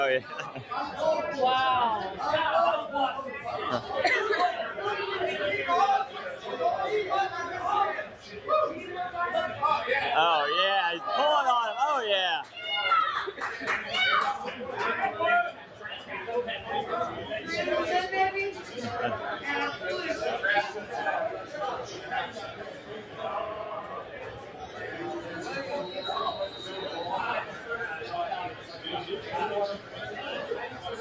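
A noise suppressor built for speech stayed active for the whole clip and treated held tones, ambience and decaying tails as noise. Its gain swings by around 10 dB, so sustained sound pumps and thins while attacks pass through. The call microphone processing passes nothing above 8 kHz.

The noise suppressor cut sound at 6.07–6.46 s, 8.05–8.41 s, 15.52–16.68 s, 18.59–18.77 s, 20.79–25.3 s, 27.45–30.01 s and 30.69–30.85 s. The drops reach about 6, 7, 7, 5, 7, 7 and 6 dB. The 20.79–25.3 s stretch sags for roughly three seconds as tails sink early.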